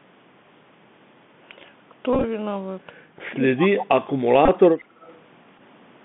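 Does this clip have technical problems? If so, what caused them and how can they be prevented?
Yes. Bluetooth CVSD headset codec, throughout: the audio is confined to roughly 150 Hz to 3.5 kHz, with grainy hiss and scratchy, overloaded highs, which fits a 64 kbit/s CVSD link. Prevent it by using a headset and phone that negotiate the wideband mSBC or LC3 voice codec, or a wired microphone.

Bluetooth headset packet repeated, at 2.13 to 2.24 s, 4.46 to 4.49 s and 5.58 to 5.60 s: lost voice packets were replaced by re-decoding the previous one. The longest run, about 30 ms, gives a brief buzz near 267 Hz. Prevent it by keeping the headset close to the phone, away from Wi-Fi and USB 3 interference.

Speech suppressed in double talk, from 3.14 to 4.09 s: the sound dips by up to around 25 dB in pieces totalling about half a second. The likely cause is an echo canceller turning down this side's voice along with the loudspeaker echo while both sides talked at once. 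Prevent it with better echo cancellation or headsets on both ends, so the far side's audio never reaches a microphone.

Echo leak, at 4.79 to 4.84 s and 5.01 to 5.17 s: a faint copy of the sound returns 155 ms late, around 30 dB below the direct sound. This is likely residue that the far end's canceller let through from its loudspeaker. Prevent it by having the far end use a headset or lower its speaker volume.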